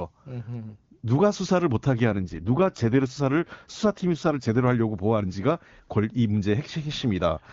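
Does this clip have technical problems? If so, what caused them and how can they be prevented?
Yes. From 2.12 to 4.68 s the speech turns rougher and more synthetic, then clears again. This is an AMR rate drop: on a weak radio link the network switched the AMR wideband (HD Voice) codec to a lower mode, and the sound fits a move from 23.85 to 8.85 kbit/s, with the freed bits spent on error protection. Unlike a fallback to narrowband, the high frequencies stay, and unlike packet loss, there is no gap or dropout. Better radio coverage or signal strength prevents it.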